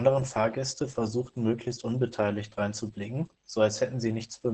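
Throughout the clip, Opus voice compression runs its SILK speech coder in wideband mode at a starved rate, one that fits around 10 kbps. Nothing remains above 8.6 kHz, and the coarsely coded excitation leaves the speech heavily muffled, hoarse and faintly robotic.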